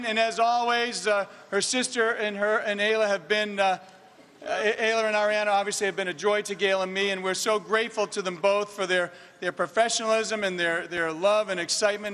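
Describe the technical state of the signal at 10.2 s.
At 10.2 s the signal runs intact, with no dropout, distortion, glitch or other fault to be heard at that point.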